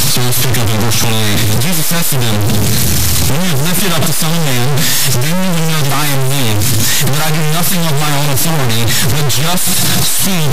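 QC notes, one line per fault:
Throughout, stuck bit: the whole clip carries a harsh, buzzy distortion that follows the waveform. About half the samples land wrong by a fixed step of around -5 dBFS, which points to a very high-order bit held at one value, likely a broken data line or converter fault. Because that bit also flips with the sign of small values, quiet passages fill with loud noise rather than falling silent.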